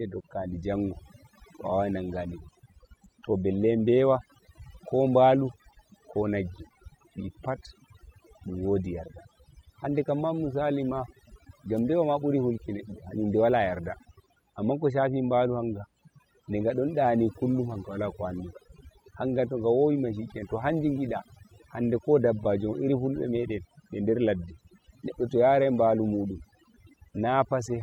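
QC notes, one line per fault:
throughout, overdone noise removal: the noise reduction was pushed too hard on a noisy speech recording, so any frequency band sitting close to the noise estimate gets pulled way down or gated off entirely. The quiet parts of the voice fall below that line and get thinned out along with the noise. What's left is a background that drops away, with little twinkly specks popping in and out.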